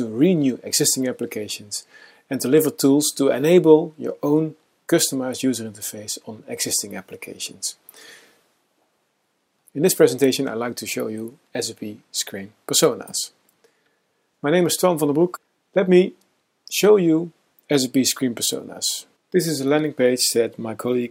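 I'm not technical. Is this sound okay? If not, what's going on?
Yes, this sound is okay, and there's nothing going on that needs fixing.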